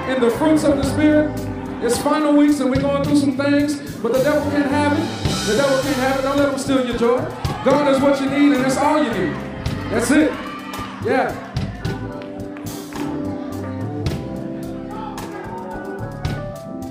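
No technical faults can be heard anywhere in the clip. Nothing breaks up, drops out or distorts at any point.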